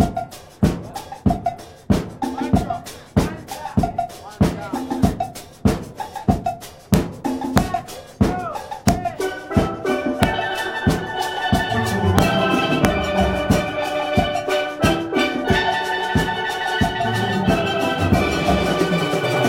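Integer overflow cracks at 6.94, 7.58, 8.89, 10.23, 12.19 and 12.85 s: loud peaks pushed barely past full scale, by about 1 dB at most, wrap to the opposite sign instead of being limited, so each jumps across the whole range as a violent crack, harsher than clipping.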